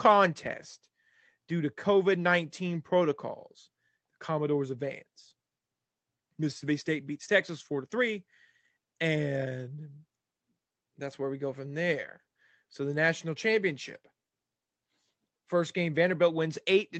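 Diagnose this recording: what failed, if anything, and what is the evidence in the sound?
Nothing in the chain audibly failed: the speech holds steady throughout, with no break, distortion or disturbance at any stage that points to a failure.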